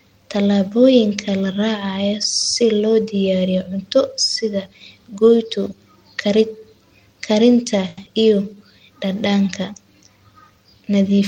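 At 7.88 to 7.98 s there is a short stall from a late packet. The buffer ran dry, so the sound is held for 90 ms, then resumes with nothing lost.

At 8.05 to 8.07 s comes a short concealed packet loss. About 50 ms never arrived, and a brief 10 ms patch replaced it. The delay dropped by around 40 ms, leaving a quick smear.

From 8.29 to 8.69 s the jitter buffer slow-down is audible. Repeated fragments add 54 ms, so the speech runs at 88% speed at the same pitch.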